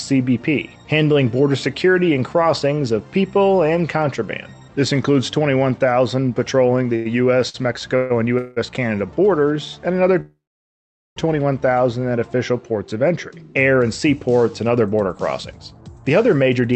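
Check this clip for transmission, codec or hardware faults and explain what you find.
The clip has three kinds of network timing fault, clustered between 7 and 11 seconds and again near the end, heard through a call path whose coding keeps content up to about 8 kHz, consistent with Opus at around 48 kbps.

Short stall from a late packet, at 6.95 to 7.07 s and 7.49 to 7.56 s: the sound hangs on one moment for 97 ms and then 49 ms, with a slight buzz or dip. A packet arrived late, the jitter buffer emptied, and the receiver stretched the last sound until the packet arrived, so nothing is lost.

Call audio freeze, at 7.96 to 8.12 s, 8.38 to 8.58 s and 10.20 to 11.18 s: the audio is held as a fading buzz or hiss for 140 ms and 184 ms. In the third freeze it sustains for 958 ms, about 800 ms of it silent. The likely cause is packets held up in transit, so the buffer drained and playback resumed where it stopped.

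Jitter buffer speed-up, from 14.80 to 16.73 s: the sound runs about 10 percent fast at unchanged pitch, hurried. Having built up excess delay, the receiver cut out many tiny pitch-period slices, trimming roughly a fifth of a second overall.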